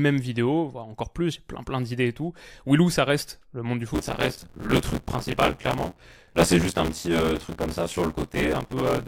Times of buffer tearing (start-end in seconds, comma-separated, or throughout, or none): 3.94-9.07